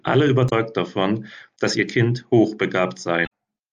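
At 0.46 to 0.52 s and again at 3.23 to 3.27 s the speech breaks into a brief chirp, squawk, click or short hole from damaged data in a compressed stream: corrupted frames are misdecoded until the decoder resyncs.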